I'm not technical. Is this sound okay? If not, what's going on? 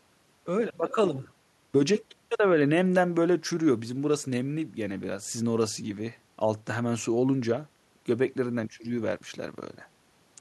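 Yes, nothing wrong here.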